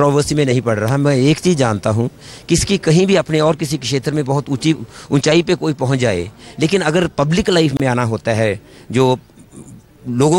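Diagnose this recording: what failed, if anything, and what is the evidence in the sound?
What broke here is a gap at a join of encoded pieces, so it's a codec-stage problem from stitching separately encoded chunks together. At about 7.77 s the sound drops out into silence for roughly 29 ms, ending around 7.80 s. The edges are smeared, and afterwards the sound simply picks up where it left off. That's encoder start-up delay and last-frame padding left in at the seam instead of being trimmed.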